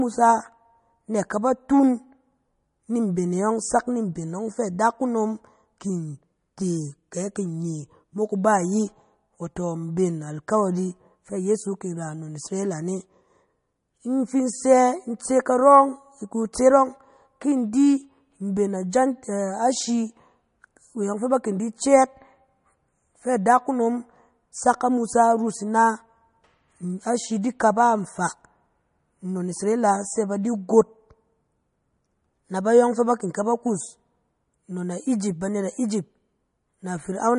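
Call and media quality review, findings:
MP3 compression damage throughout: nothing above 10.6 kHz, plainly audible watery swirl on speech. Likely a starved MP3 encoder, consistent with about 40 kbps, dropping weak spectral lines.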